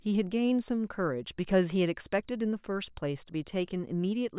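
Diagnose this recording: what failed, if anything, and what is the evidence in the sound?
Nothing in the chain has failed: the speech signal arrives intact and continuous, with no audible break, distortion or damage at any stage between capture and playback.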